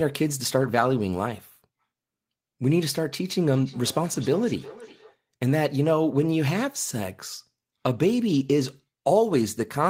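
From 3.53 to 5.2 s, feedback echo between two devices: the speech returns roughly every 0.4 s at about -20 dB, replayed by a second device whose sound no echo canceller removes.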